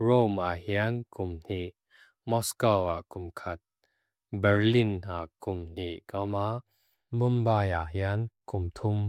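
No faults can be heard anywhere in the recording, from its first moment to its last.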